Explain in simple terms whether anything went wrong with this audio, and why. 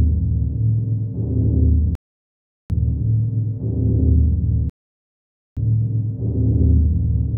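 Something did go wrong: the playback hit two rebuffering stalls. At 1.95 s the sound drops to silence for about 0.75 s, then picks up at 2.70 s exactly where it left off. It happens again at 4.70 s, this time for about 0.87 s, resuming at 5.57 s. In both cases the player ran out of downloaded audio and had to wait for more to arrive. No sound is missing; the stalls only add dead time.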